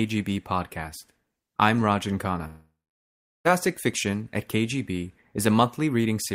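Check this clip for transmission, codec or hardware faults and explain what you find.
One transmission fault turns up in this speech clip, a long network dropout from 2.47 to 3.47 s. Packets likely stopped arriving, so the receiver stretched the last sound into a fading buzz, then gave about 0.74 s of near-silence before speech returned with nearly a second gone.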